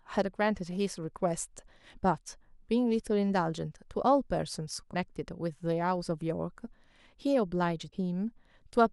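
At 4.93 to 4.95 s and again at 7.90 to 7.93 s, the speech jumps forward with a brief chirp or noise burst. Each lasts roughly one 26 ms frame. A likely cause is a broken MP3 bit reservoir: frames went missing, and the next frame decoded borrowed bytes from the wrong frame.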